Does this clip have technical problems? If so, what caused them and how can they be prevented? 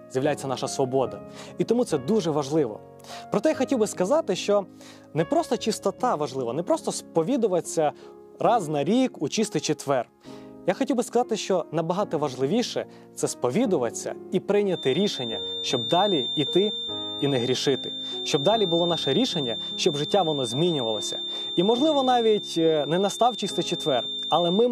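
Yes. From 14.64 s to the end, a thin feedback whistle near 3.6 kHz sits roughly 10 dB below the sound, likely from a speaker-to-microphone loop held just short of runaway. It swells and fades slowly and never builds, unlike a full howl or a steady electrical tone. Lowering monitor gain, moving the microphone away from loudspeakers, or notching 3.6 kHz would prevent it.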